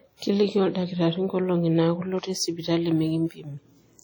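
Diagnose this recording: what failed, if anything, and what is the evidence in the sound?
The speech rings and sounds washy from start to finish, with a hiss that swells and fades with the voice. The likely cause is heavy WMA compression at the codec stage, fitting a 32 kbps stream whose long transform blocks smear quantisation noise across tens of milliseconds.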